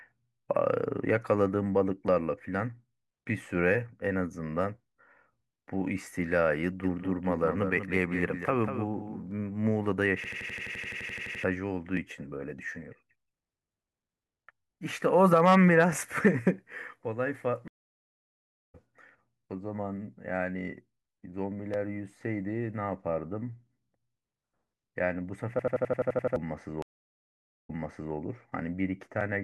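From 6.83 to 9.31 s the speech is shadowed by a flat, full-band echo, a copy about 10 dB quieter trailing by roughly a fifth of a second that starts and stops abruptly. It is a doubled audio track, likely a second, slower capture path mixed in.

From 10.24 to 11.44 s the speech turns into a rattling stutter: one 85.33 ms slice repeats 14 times at 11.7 Hz. This system hang loop comes from the machine freezing while the audio hardware kept replaying one ring buffer, which fits a 4096-sample buffer. About a second of speech is lost.

From 17.68 to 18.75 s the sound drops out for 1057 ms, then resumes roughly half a second further on. This stream reconnect happens when the connection breaks and a fresh decoder picks up mid-stream.

The same hang loop returns from 25.59 to 26.36 s, with 9 repeats of the 85.33 ms slice at 11.7 Hz, and about 0.7 s of speech is lost.

A second stream reconnect follows from 26.82 to 28.14 s: 864 ms of silence, after which playback resumes 456 ms earlier, so a short stretch is heard again as the server resends buffered audio.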